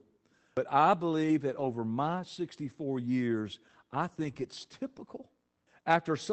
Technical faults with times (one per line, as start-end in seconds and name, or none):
1.51-1.69 lost packet rebuilt from error correction
4.19-4.48 lost packet rebuilt from error correction
4.31-4.34 short concealed packet loss